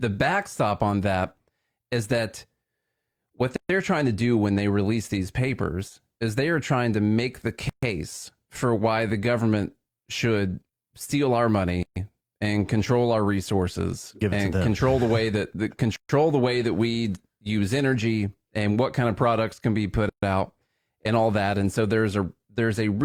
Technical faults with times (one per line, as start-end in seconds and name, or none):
3.56-3.69 gap at a join of encoded pieces
7.69-7.83 gap at a join of encoded pieces
11.83-11.96 gap at a join of encoded pieces
15.96-16.09 gap at a join of encoded pieces
20.09-20.23 gap at a join of encoded pieces